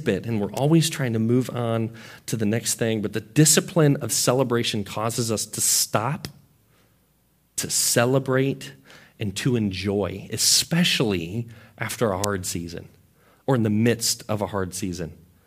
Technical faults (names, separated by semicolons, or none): electrical switching spike